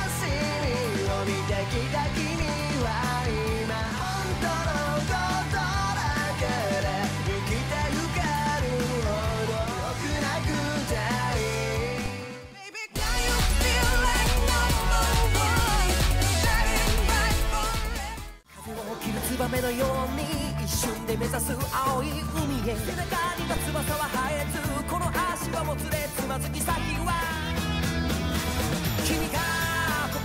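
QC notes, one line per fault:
2.42, 12.06, 15.59 and 23.57 s: DC step. At each of these instants the waveform's zero line jumps abruptly by about -20 dBFS (about -19 dBFS at the last two) and then bleeds away as a 20 Hz high-pass pulls the baseline back toward zero. The sudden offset and its quick decay form a single low-frequency transient, heard as a brief thump or click, while the sound itself carries on unchanged.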